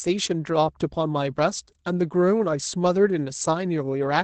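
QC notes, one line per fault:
Throughout, Opus voice compression: the speech cuts off near 8.8 kHz and sounds hoarse and faintly robotic from coarse SILK coding. That suggests roughly 12 kbps, and the roughness rules out a simple low-pass filter.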